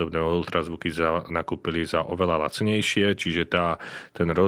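Speech recording, and nothing in it registers as a technical fault.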